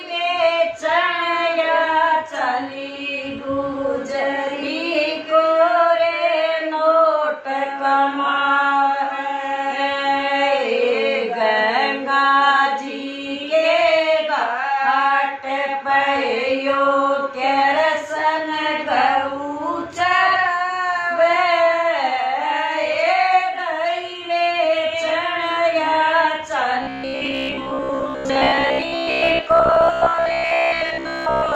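From 26.83 s to 31.55 s the sound turns into a rigid, metallic buzz locked at 66.7 Hz, only loosely tracking the original. This robotic sound likely comes from repeated short buffers: roughly 15 ms chunks looping to fill gaps, with most of the real audio skipped.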